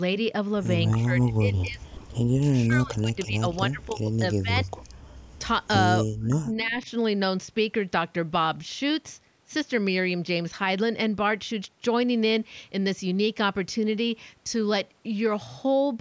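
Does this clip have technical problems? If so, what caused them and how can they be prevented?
Yes. Speech suppressed in double talk at 0.95–2.0, 2.4–4.11, 4.32–4.89 and 6.2–6.89 s dips the voice by up to about 35 dB. This is likely an echo canceller muting both talkers when they overlap, and it shows as hollowed, gappy stretches in the waveform. Prevent it with full-duplex echo cancellation or a headset.

An echo leak at 3.52–3.56 s returns a faint copy about 35 dB down, 304 ms late, which appears as a brief smear on the spectrogram. Its likely cause is loudspeaker pickup that slipped past cancellation. Prevent it with headphones or lower speaker volume.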